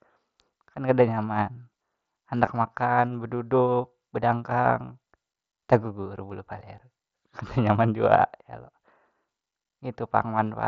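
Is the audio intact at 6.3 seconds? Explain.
No. At 6.29 s there is a brief concealed Bluetooth headset packet loss. About 7.5 ms of audio went missing, which points to a single lost frame. The receiver patched the gap by repeating a closely matching stretch of the preceding waveform. The patch is nearly inaudible.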